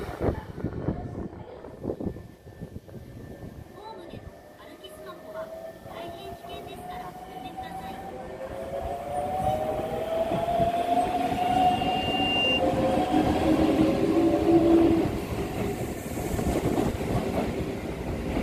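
At 11.35 s a loudspeaker feedback squeal begins. A single tone near 2.8 kHz swells for about a second. It peaks at about 5 dB above the sound. The microphone was re-amplifying its own loudspeaker until the squeal ended at 12.64 s.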